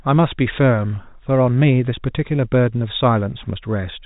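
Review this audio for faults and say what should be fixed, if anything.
Nothing needs fixing; no faults were found here.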